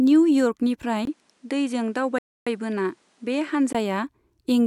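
At 1.05 s the speech goes quiet for about 20 ms, then returns duller, with nothing above 11.4 kHz, some 5 dB lower, and with a new hiss well below the speech. This is most likely an input switched to a poorer device. A simple filter change would narrow the band, but it would not bring its own noise floor and level drop. The full, brighter sound returns at 3.75 s.

Inside that stretch, from 2.18 s to 2.47 s, the audio stops dead for about 0.28 s and then picks up exactly where it left off. This is a rebuffering stall: playback ran out of downloaded audio and waited for more to arrive. Unlike a dropout, which skips over part of the speech, a stall loses nothing. It only adds time, so the speech resumes mid-flow with no gap in its content.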